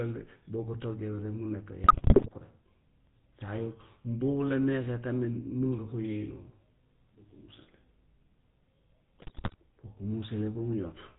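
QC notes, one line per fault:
Throughout: GSM full-rate codec. The speech has a buzzy, gravelly roughness and is band-limited, with nothing above 4 kHz, which fits the 13 kbps GSM full-rate coder. The codec rebuilds the voice from a vocal-tract filter excited by a sparse, regularly spaced pulse train that keeps only a third of the excitation detail. That coarse excitation is what gives the harsh, grainy texture, and the coding damage is plainly audible.
1.84–2.29 s and 9.18–9.55 s: GSM bit errors. In both stretches the speech breaks up into squawks, pops and gargling. Corrupted bits reaching the decoder scramble the filter, pitch and gain parameters frame by frame, so the spectrum twists and the level jumps abruptly. The damage covers nearly every 20 ms frame in each span, and the second burst has a slightly higher error rate, 5.87% against 4.56%, which fits a weak radio link.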